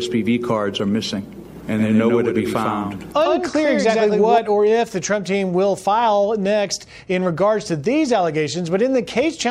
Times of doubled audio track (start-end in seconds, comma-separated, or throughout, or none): 1.56-4.38